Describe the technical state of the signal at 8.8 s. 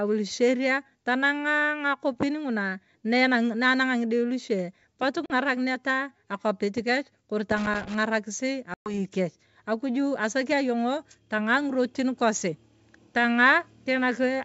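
At 8.8 s the speech falls inside packet loss on an ADPCM call, spanning 8.74 to 8.94 s. About 120 ms of this G.722 stream, several packets' worth, is replaced by silence, so the decoder's predictor and step size drift from the sender's. The spectrogram shows a hard-edged blank column, and the waveform drops abruptly to flat. Speech resumes slightly distorted, and the distortion settles within tens of milliseconds.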